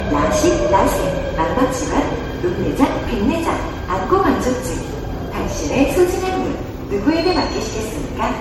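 Generation loss runs through the whole clip. The likely cause is repeated MP3 coding, consistent with a 64 kbit/s setting, with the material decoded and re-encoded somewhere around ten times. Each new pass lands on a shifted frame grid and quantises again, so the errors stack. The sounds come out swirly and hollow, with smeared, softened attacks, and nothing survives above 16.5 kHz.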